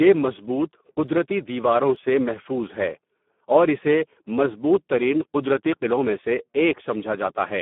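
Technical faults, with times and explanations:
Throughout: Speex codec. The speech has been squeezed through Speex at about 8 kbps, and at that rate the excitation gets so few bits that the sound turns noisy and hoarse. The damage is heavy. The line carries roughly 200 Hz to 3.5 kHz and nothing remains above 3.5 kHz, so sibilants are dull. This is different from simple band-limiting: the grainy, synthetic texture stays on every syllable, not only on the missing treble.
1.96 s: dropped samples. A single sharp click lands just before "سے محفوظ ہے". It is likely a few missing samples, roughly four, about 0.07 of a millisecond. The waveform jumps from one value straight to a later one, and that step shows up as a thin vertical line across the spectrum. No sound is lost. This sets it apart from a dropout or gap, where audible content goes missing and a brief silence or stutter can be heard.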